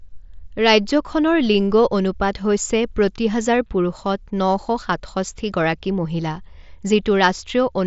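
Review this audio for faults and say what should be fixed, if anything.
Nothing stood out on listening to this speech recording, which comes through a Bluetooth mSBC headset link with content reaching up to about 7.7 kHz, so there is nothing to fix.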